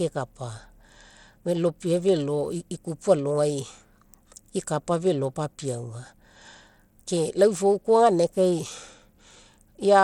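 A speech clip whose treble flickers and thins throughout, with a gritty, grainy noise and aliasing riding on the sound and nothing above about 19.3 kHz. This points to likely Bluetooth SBC compression at a low setting, consistent with roughly 96 kbps, starving the upper sub-bands of bits.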